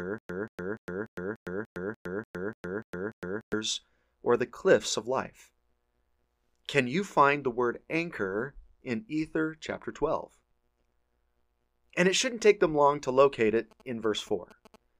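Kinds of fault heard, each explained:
Stutter with silent gaps: until 3.53 s, a 183 ms fragment replays every 293 ms between digital silences, likely a stalled stream; plain dropouts never repeat.
GSM signalling bursts: from 13.33 to 14.76 s, a galloping dit-dit-dit of short 217 Hz buzzes sits around 25 dB under the sound; steady mains hum never gallops.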